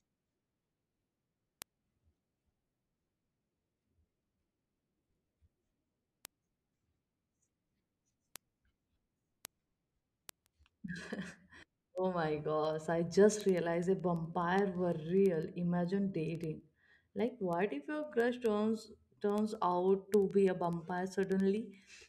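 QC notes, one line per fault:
0.10–22.08 s, word clock ticks: steady ticks about ten times a second across the speech, sharp and uneven in strength. The receiver's clock runs free of the sender's, drifting by a few hundred ppm, so each slip misreads samples and drops or repeats one.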